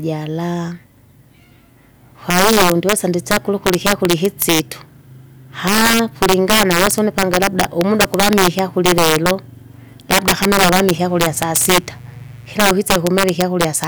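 It's a speech recording with integer overflow running right through it. The gain sits about 10 dB too hot, so the loudest peaks, only a small fraction of the samples, blow past the integer limit and wrap to the opposite sign instead of clipping, giving violent cracks on louder moments. Then from 10.98 to 12.80 s a mains buzz comes in, a raspy 60 Hz hum with harmonics well up into the kilohertz range, sitting well below the speech. That sounds like switching spikes from a dimmer, rectifier or unshielded cable getting into the signal path.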